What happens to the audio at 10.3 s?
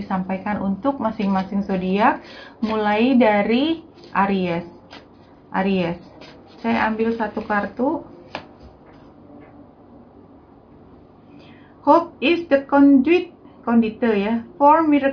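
Nothing goes wrong at 10.3 s; the audio plays through that moment intact, with no dropout, click or other fault.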